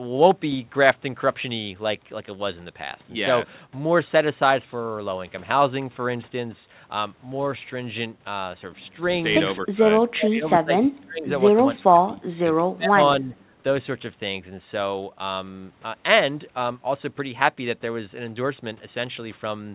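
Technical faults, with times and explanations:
9.45–11.29 s, 11.56–12.99 s and 13.21–13.35 s, speech suppressed in double talk: the speech dips and breaks up, deepest in the first stretch at around 25 dB. This is likely an echo canceller ducking during overlapping talk. The waveform shows sudden notches and the spectrogram shows faded bands.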